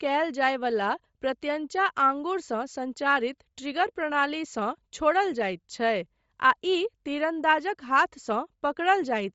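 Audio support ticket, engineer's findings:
Breathy, grainy edge on the speech, whole clip, plainly audible. Top end sounds thinned out and swapped for a hiss-like fill rather than real detail. Likely Bluetooth LC3 compression: the LE Audio codec dropping upper-band content at low rate and noise-filling it. Character fits roughly 32 kbps with 7.5 ms frames.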